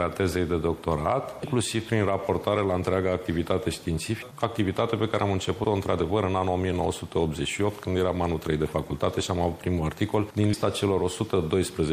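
From the start, the encoder is likely starved of bits, as at an MP3 rate near 64 kbps, so the sound turns watery and swirly. Compressed frames skipped at 1.43, 4.21, 5.63 and 10.53 s make the audio jump ahead by roughly a fifth, a half, a fourteenth and a tenth of a second, each joined by a brief smeared blip fitting 24 ms frames.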